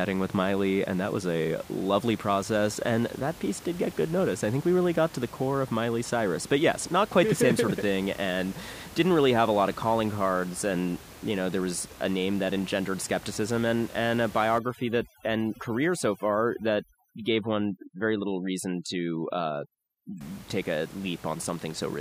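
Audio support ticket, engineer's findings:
Twinkling specks over a dropped background, 14.58–20.21 s, from "skepticism and and a" to "take a". Overdone noise removal: suppressor too strong against room noise about 20 dB down, muting bands near its noise estimate, quiet speech detail included.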